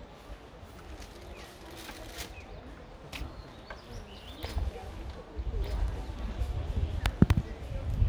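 An everyday-sound recording; from 5.62 s to the end a doubled audio track appears, a dry full-band copy roughly a second late and about 5 dB quieter, likely from a second, slower capture path. On a spectrogram, every event is repeated as a fainter, identical shape about one second later, and the waveform gains an abrupt step at the copy's onset.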